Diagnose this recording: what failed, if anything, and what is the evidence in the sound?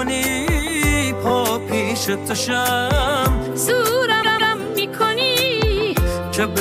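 Repeated frames in the compressed stream, a storage or transmission fault ahead of the decoder. At 1.27 s a 26 ms block plays twice. From 4.22 s a 157 ms block plays three times, a stutter that adds 313 ms. A spectrogram shows identical slices side by side.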